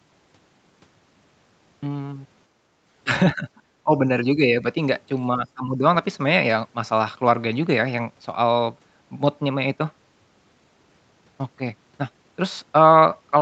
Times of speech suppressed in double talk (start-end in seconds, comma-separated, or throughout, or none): 3.35-3.47, 3.83-4.64, 5.35-5.84